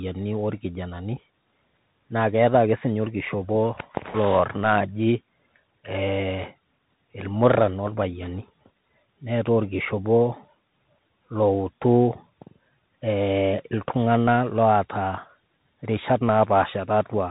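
Bluetooth CVSD headset codec damage runs through the whole recording. The speech is coded one bit per sample as a rising or falling step, which fits a 64 kbps link, so nothing above 3.8 kHz survives. Loud high sounds outpace the adaptive step and distort, s sounds turn scratchy, and a granular hiss sits underneath.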